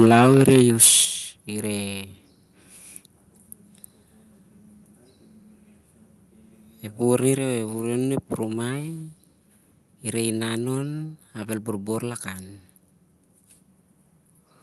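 From the start to about 1.01 s the loudest peaks are flattened and carry a harsh, crackling edge, most likely microphone overload: input gain set high enough that peaks ran about 7 dB past the converter's ceiling, with roughly one sample in twenty cut off at the limit. The squared-off tops add dense upper harmonics that sound like grit on each strong syllable.

Level then drops abruptly three times, each a single clean step rather than a fade: about 3 dB at 0.06 s, about 7 dB at 1.05 s, and about 4 dB at 7.38 s. This is likely the microphone volume being stepped down by the call software's automatic gain control, which cut the device input after detecting clipping. The largest step lands just as the distorted stretch ends, and sound and background fall together. The Opus call path's band limit and coding texture sit underneath throughout.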